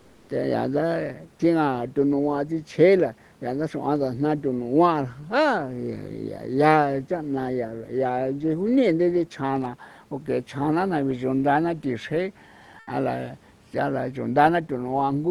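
A speech clip with comfort noise in place of the background at 0.00 to 0.27 s and 12.79 to 12.87 s. The room noise turns flat and featureless there, about 1 dB quieter, then about 3 dB louder. Likely Opus DTX filling the pauses.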